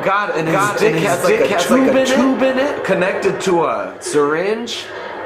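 From about 0.47 s to 3.31 s there's a doubled audio track: a second full-band copy of the sound trailing the original by around half a second, at roughly the same level, so the two compete rather than one sitting under the other. It's dry, with no decay or room tone, and it cuts in and out abruptly. Most likely a second capture path running slower, or an edit that left two copies out of step.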